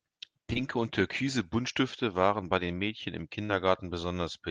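At 0.53 to 0.57 s, just before "und türkise", and again at 3.45 to 3.51 s, there is short concealed packet loss. About 20 ms and then 40 ms of audio never reached the Opus decoder in time, which fits one and then two lost 20 ms frames. The receiver extrapolated the preceding sound to fill each gap, leaving a brief smeared wobble.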